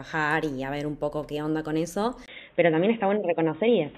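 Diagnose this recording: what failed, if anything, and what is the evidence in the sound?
Input switched to a poorer device at 2.26 s, lasting until 3.97 s. After a 20 ms gap the speech turns dull, with nothing above 3.8 kHz, a level shift of about 5 dB, and new noise about 40 dB down. At the driver stage, capture likely moved to a different device.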